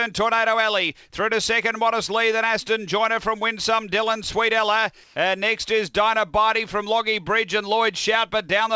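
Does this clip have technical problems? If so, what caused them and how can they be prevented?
Yes. From 5.04 to 5.16 s, 120 ms of the real background gives way to comfort noise in place of the background, which is likely discontinuous transmission, with the receiver filling the gap with synthetic noise. On a spectrogram it shows as a smooth, featureless patch. On a waveform, the texture turns even and the level shifts by about 2 dB. Turning off discontinuous transmission (DTX) at the sender prevents it.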